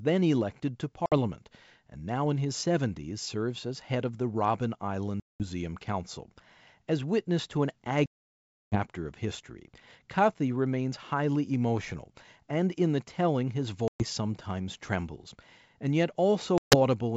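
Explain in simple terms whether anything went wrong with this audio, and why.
Packets of this speech call went missing on the way, a fault called packet loss on an ADPCM call. Each lost stretch was replaced by dead silence, and the receiving decoder lost track of the sender's running prediction. You hear abrupt holes at 1.06 s (after "then elected to"), 5.20 s, 8.06 s (between "witness to an" and "of history", the longest at about two-thirds of a second), 13.88 s (between "in the telling his" and "sometimes trembles") and 16.58 s. The speech then returns slightly distorted before settling.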